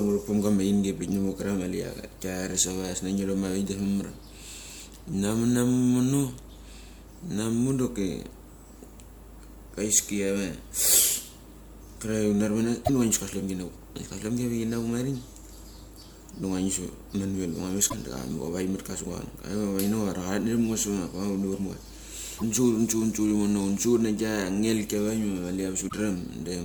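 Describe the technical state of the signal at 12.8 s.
Damaged data in a compressed stream, 12.82–12.90 s: corrupted bytes make the decoder lose sync and hunt for the next frame, leaving a chirp, squawk, click or short hole.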